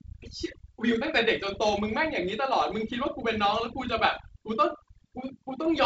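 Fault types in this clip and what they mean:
Overdone noise removal: a noise reduction stage set too strong mutes bands near its noise estimate, leaving a lowered background with twinkling specks throughout.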